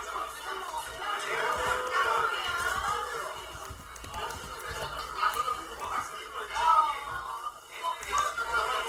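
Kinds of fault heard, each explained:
Opus compression: Across the whole clip the sound takes on a rough, grainy, noisy texture, with tonal parts smeared into hiss, though the top end still reaches about 20.2 kHz, so nothing sounds muffled. This is likely Opus music-mode (CELT) coding at a rate that fits roughly 16 kbps. The encoder keeps each band's energy but, short of bits, fills detail with folded copies of lower bands or noise, producing plainly audible graininess rather than swirling holes.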